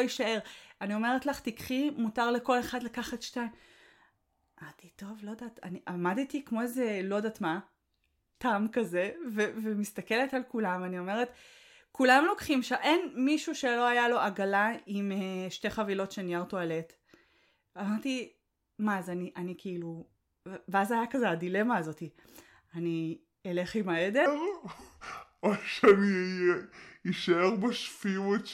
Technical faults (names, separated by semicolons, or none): section at the wrong speed